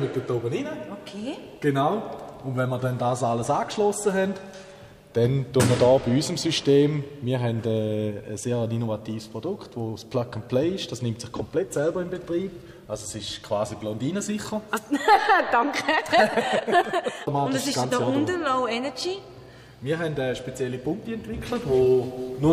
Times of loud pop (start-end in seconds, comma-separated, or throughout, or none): none